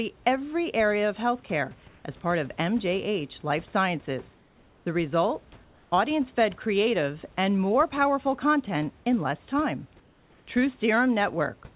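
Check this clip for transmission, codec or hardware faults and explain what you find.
One fault shows up three times: comfort noise in place of the background, at 4.36 to 4.86 s, 5.64 to 5.92 s, and 10.0 to 10.46 s just after "content in less time". In those gaps the room's real background gives way to a flat, featureless hiss about 2 to 3 dB quieter. That's likely discontinuous transmission, with the receiver synthesising filler noise while the sender goes quiet. The call path's narrowband sound, with nothing above 4 kHz, fits G.711.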